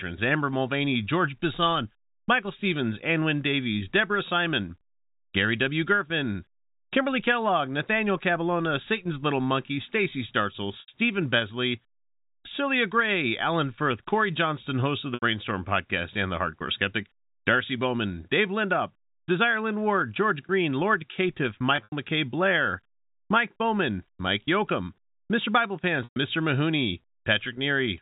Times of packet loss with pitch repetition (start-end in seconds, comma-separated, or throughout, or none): 10.80-10.88, 15.14-15.22, 21.76-21.92, 26.04-26.16